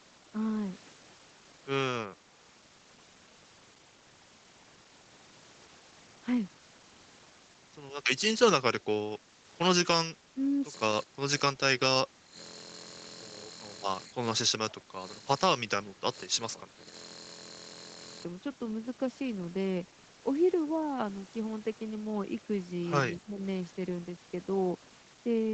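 A speech recording through call microphone processing, with nothing above 8 kHz, shows speech suppressed in double talk, likely from an echo canceller turning the talker down. The voice dips by about 5 to 15 dB at 8.81–8.86, 9.18–9.39, 11.03–11.22, 11.53–12.37, 14.07–16.87 and 23.24–23.40 s.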